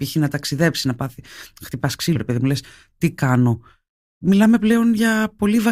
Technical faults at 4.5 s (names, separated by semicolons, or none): none